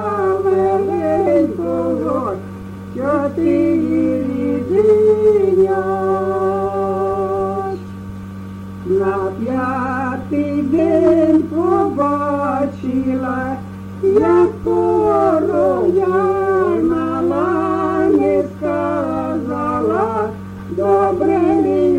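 Compressed frames are skipped at 1.26 s, 10.78 s and 12.01 s. The audio jumps ahead by whole frames of about 23 ms, losing roughly a tenth of a second at first and about 50 ms later. On a spectrogram, each shows as an abrupt shift.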